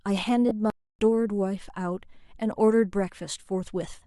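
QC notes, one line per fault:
0.49 to 0.52 s, lost LE Audio frames: a 20 ms gap, which fits two lost 10 ms frames, where the LC3 decoder concealed the dropout by repeating the previous spectrum with scrambled phase signs, so the speech briefly turns into a short, noisy smear instead of clean syllables.
0.70 to 0.99 s, playback stall: the output runs dry for about 290 ms, most likely because the player was starved of data or its thread was held up, so the speech cuts off mid-flow into silence and then carries on after the pause.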